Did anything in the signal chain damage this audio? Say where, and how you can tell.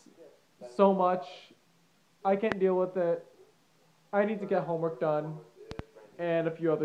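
Yes. A loud pop at 2.52–2.54 s (about 20 dB above the signal) and a double pop at 5.71–5.82 s, likely analogue-wiring voltage transients riding over the sound.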